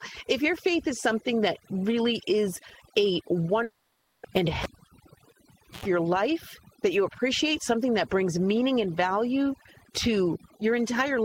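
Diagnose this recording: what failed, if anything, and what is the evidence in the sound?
Call processing applied overdone noise removal across the whole speech clip. The suppressor is cutting individual frequency bands deep whenever they sit close to its noise estimate, so the background collapses to near silence scattered with twinkling, chirpy specks. Low-level parts of the speech fall under the same threshold and are removed with the noise.

From 3.63 to 4.26 s the audio points to a long network dropout as the likely cause. For about 0.6 s no fresh audio is heard. The receiver's concealment stretches the last sound into a fading buzzy tone for that whole stretch rather than going silent. About 0.6 s of the original is missing when normal audio resumes at 4.26 s.

At the analogue wiring stage, a cable was pulled and plugged in between 4.63 and 5.86 s. A pop at 4.63 s opens a gap of about 1.18 s of near silence. 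A burst of 60 Hz mains buzz lasting about 0.1 s follows, which is the plug tip touching before it seats fully. A second pop at 5.86 s marks the signal returning.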